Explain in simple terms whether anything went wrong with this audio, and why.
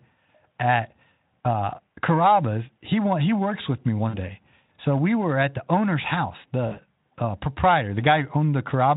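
Two brief glitches, at 4.09–4.19 s and 6.67–6.79 s, are VoIP packet loss concealed by the speech codec. Each time, 40 ms of speech never arrived, so the decoder stretched the last sound into a buzzy tone or a coloured noise that fades. Unlike a plain dropout, there is no silent gap.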